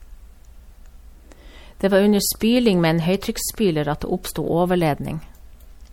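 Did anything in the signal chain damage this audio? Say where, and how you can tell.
Yes. MP3 compression is the likely cause, and the damage sits at the codec stage across the whole speech clip. The sibilants have a swirly, watery texture and a metallic chirp, and consonant attacks sound smeared, which fits a bitrate around 64 kbps. On a spectrogram the treble shows patchy holes where weak frequency lines drop in and out from frame to frame. The waveform looks ordinary.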